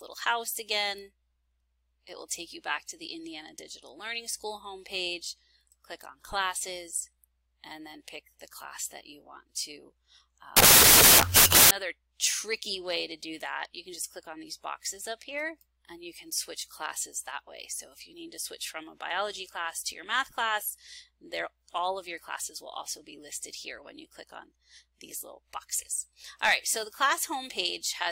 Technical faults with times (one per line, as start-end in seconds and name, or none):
10.57-11.71 wrong sample width